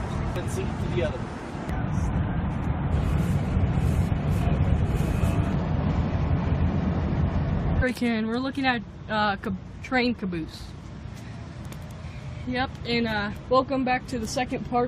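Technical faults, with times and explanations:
7.81 s and 13.36–13.39 s, damaged data in a compressed stream: two short blips where part of the stream was wrong, so the decoder misread those frames, lost sync and had to hunt for the next frame header, which comes out as a brief glitch.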